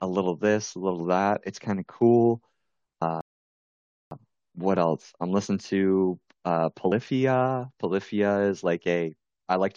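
The clip is speech with two kinds of fault. There is audio missing between chunks at 3.02 s and again at 6.92 s. At each point the sound jumps forward with no gap of silence. Roughly a tenth of a second of speech is gone each time, so the join sounds abrupt. The spacing suggests the likely cause is a recorder working in 4-second chunks and dropping a sliver at each handover. There is also a rebuffering stall from 3.21 s to 4.11 s. The speech stops dead and there is silence for about 0.9 s. Then it resumes exactly where it left off. Nothing is skipped here. The player ran out of downloaded audio and waited for more, so the stall only adds time.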